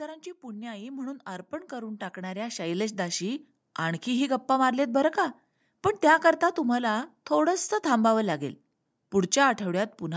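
From 0.41 to 4.08 s, automatic gain rising lifts speech and background together by about 16 dB, a slow swell rather than a sudden jump, above a call-style band topping out at 8 kHz.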